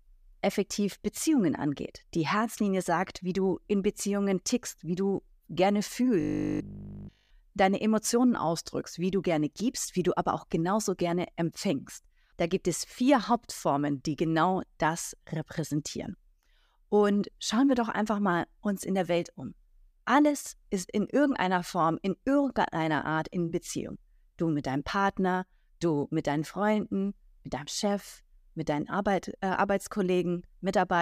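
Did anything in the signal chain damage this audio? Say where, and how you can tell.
Yes. A starved driver buffer likely kept replaying roughly 20 ms blocks, causing robotic sound from repeated short buffers: from 6.20 to 7.30 s, the speech becomes a rigid, metallic 50 Hz buzz.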